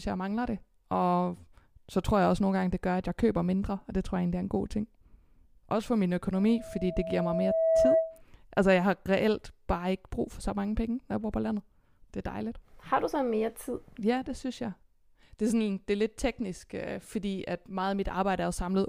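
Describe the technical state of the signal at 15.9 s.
At 15.9 s the speech signal is intact, with no audible fault at that moment.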